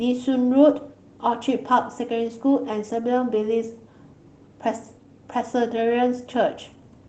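No technical faults can be heard in this speech recording.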